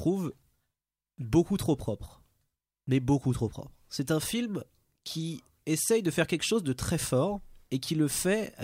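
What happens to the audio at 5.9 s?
At 5.9 s the speech carries on intact, with no dropout, click, distortion or other fault at that moment.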